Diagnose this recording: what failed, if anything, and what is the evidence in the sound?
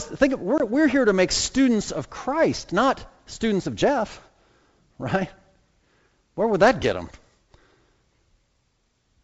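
Packet loss on an ADPCM call, from 0.58 to 0.65 s, between "think of" and "we're here to make", is a network-stage fault. The sound drops to a hard-edged silence, which fits a couple of lost packets. Because ADPCM encodes only differences from a running prediction, the receiver's predictor and step size drift away from the sender's across the gap. Speech then resumes slightly distorted until the two resynchronise. The G.722 wideband coding at 64 kbit/s carries the call itself.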